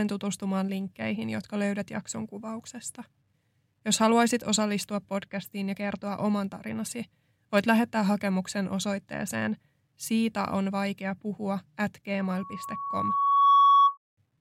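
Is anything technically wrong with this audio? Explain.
Yes, there's loudspeaker feedback squeal near the end, running from about 12.2 s to 13.98 s. The mic is hearing the speaker it feeds, and at around 1.1 kHz the loop gain tips past one, so that frequency keeps feeding itself. You hear a single tone creep in and swell over roughly a second and a half, ending up as a piercing squeal that sits something like 10 dB above the speech before it cuts off.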